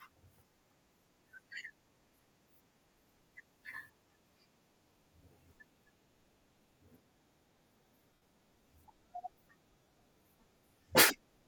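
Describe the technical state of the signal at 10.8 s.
At 10.8 s the speech is intact, with nothing there beyond the light, unobtrusive trace of lossy compression.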